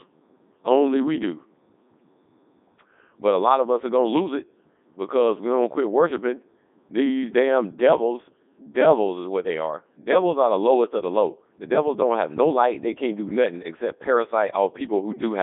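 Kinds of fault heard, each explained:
Codec 2 vocoder: The speech is rebuilt at the decoder from pitch, voicing, energy and a spectral envelope rather than the original waveform, giving a heavily robotic, buzzy tone that fits the 3.2 kbit/s mode. It is band-limited to about 200 Hz to 3.6 kHz, with nothing above 3.8 kHz.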